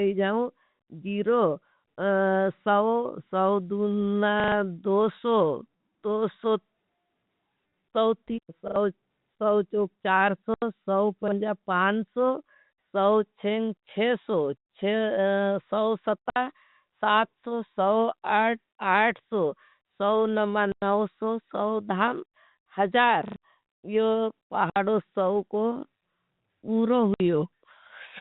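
Telephone-band speech carries two faults. A repeated buffer stutters at 4.4, 8.68, 11.28 and 23.28 s: the same short fragment loops with hard joins, which fits a 40 ms buffer replayed when audio arrived late. Packet loss filled with silence instead leaves empty gaps of 60 to 100 ms right after "सवचोक चार" at 10.54 s, then at 16.3, 20.72, 24.7 and 27.14 s, spacing that points to 20 ms packets.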